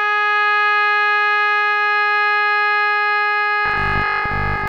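From 3.66 s to 4.68 s the music collapses into a rigid, metallic buzz pitched at 50 Hz, still loosely tracing the original material underneath. This is robotic sound from repeated short buffers. The likely cause is audio arriving too seldom, so the playback side loops the last chunk to fill the gaps. A 50 Hz buzz fits a 20 ms buffer repeating, and roughly two thirds or more of that stretch is recycled rather than new.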